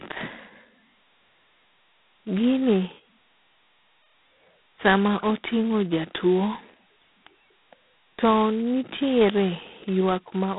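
From start to finish the speech carries G.726 ADPCM damage, and it is heavy. The codec sends only a coarse difference from a running prediction. At so few bits per sample, large quantisation error is left behind. You hear it as a harsh, rasping hiss that rises and falls with the speech level. That harshness fits the 16 kbit/s rate. The band runs from 150 Hz to 3.6 kHz. Nothing passes above 3.8 kHz.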